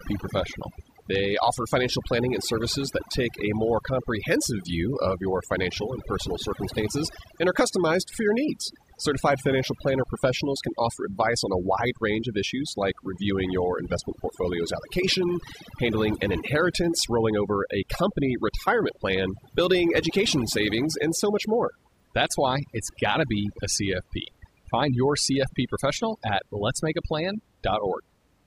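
Throughout the speech, the background drops and breaks up into twinkling, chirpy specks. This is overdone noise removal: the reduction was set so hard that frequency bands close to its noise estimate get pushed down or cut, taking quieter parts of the voice too.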